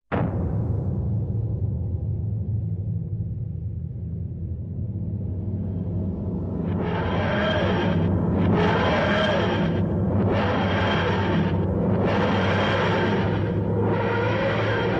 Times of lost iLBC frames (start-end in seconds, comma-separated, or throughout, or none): none